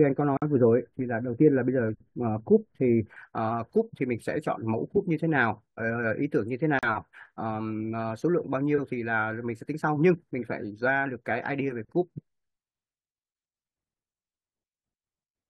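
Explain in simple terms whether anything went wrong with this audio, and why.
A treble cut meant to undo a boost was applied wrongly, with de-emphasis applied wrongly, so the first 3.16 seconds sound dull and muffled. There is also a gap at a join of encoded pieces: separately encoded sections were stitched together untrimmed, leaving brief silences of 50 milliseconds at 0.37 s and 40 milliseconds at 6.79 s before the sound resumes.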